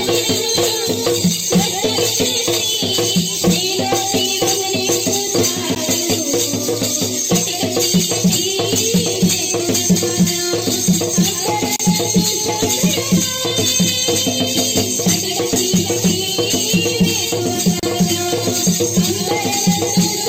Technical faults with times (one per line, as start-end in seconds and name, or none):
5.75 gap at a join of encoded pieces
11.76-11.79 gap at a join of encoded pieces
17.79-17.83 gap at a join of encoded pieces